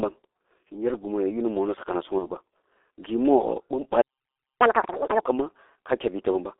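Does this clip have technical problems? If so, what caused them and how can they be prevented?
Yes, there are four problems.

The whole clip runs through the G.723.1 codec at about 6.3 kbit/s, with the band squeezed to roughly 300 Hz to 3.6 kHz. The speech comes out heavily muffled and hoarse, and the consonants smear because the codec's coarse frames update its voice model slowly. To avoid this, use a wideband codec such as Opus at a decent bitrate.

From 2.18 to 2.26 s there's VoIP packet loss concealed by the speech codec. The gap fits a single lost 30 ms frame. The decoder stretches its last pitch and filter to fill the gap, and the voice stays weak or distorted as it recovers. A jitter buffer with forward error correction or redundancy would cover this.

At 4.02 s there's a playback stall, and the speech cuts out dead for about 0.59 s until 4.61 s. The player most likely starved for data or had its audio thread blocked. 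To prevent it, give the playback buffer more headroom and keep the audio thread off blocking work.

Right after, from 4.61 to 5.20 s, comes catch-up at higher speed. The player runs the backlog at 2x by resampling, so the speech rushes along with the pitch jumped up by roughly ten semitones, then snaps back to normal. Time-stretching without a pitch change, or simply dropping the backlog, would avoid this.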